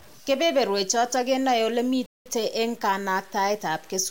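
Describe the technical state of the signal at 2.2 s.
At 2.2 s the player has most likely run out of data or had its output thread blocked, causing a playback stall from 2.06 to 2.26 s. For about 0.2 s the speech cuts off in mid-flow into silence, then resumes.

Throughout the clip, the signal has also likely been reduced to very few bits by truncation without dither, which fits a 7-bit word length. The rounding error tracks the speech at roughly 30 dB below it, so quieter passages sound gritty and grainy.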